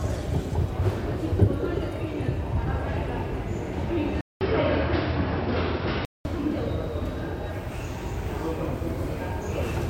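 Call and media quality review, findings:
Sound turns dull and boxy from 4.21 to 6.25 s, after a 200 ms silence; nothing above 5.6 kHz, a level shift of a few dB, and a new noise floor well below the signal. Likely input switched to a poorer device, with narrower band and its own noise.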